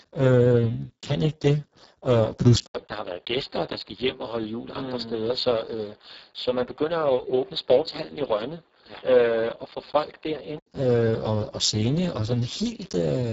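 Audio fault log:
Throughout, Speex codec: heavy damage at a rate near 5.8 kbps leaves too few bits for the excitation, so the speech sounds hoarse and noisy. Nothing survives above 7.7 kHz, and the upper band is a noise-like fill. Unlike a band cut, the grain stays in every syllable.
2.67 to 10.67 s, input switched to a poorer device: an 80 ms silence marks the change. The band then stops at 4.8 kHz, the level drops about 5 dB and a new noise floor appears about 35 dB below the speech. The likely cause is a change to a lesser microphone or a headset call profile. It differs from the codec damage in its abrupt start and end, where the fuller sound returns.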